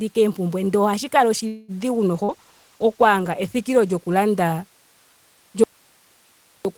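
Speech, and it has a few call-path problems. Right after "oompumbwe ndee ohashi kala", from 1.47 to 1.71 s, there's a call audio freeze: the last sound gets stretched into a fading buzz or hiss for about 210 ms, then the speech picks up exactly where it left off, so nothing's lost, it just arrives later. That's most likely packets stalling and the jitter buffer running dry. From 2.13 to 4.54 s there's a call bitrate drop, 32 down to 16 kbps, bottoming out for about 1.6 s. Opus has to code more coarsely there, so the voice gets rougher until it recovers. Inside that stretch, around 2.24 to 2.31 s, there's a short concealed packet loss: 40 ms never made it, and the decoder papered over it by extending the previous sound, which you hear as a quick smear before it blends back in. Then from 5.64 to 6.65 s, roughly a second, there's an audio dropout to a faint residue. The speech cuts out abruptly and only hiss remains, about 35 dB below the speech, likely because the signal was lost while the path after the break stayed live.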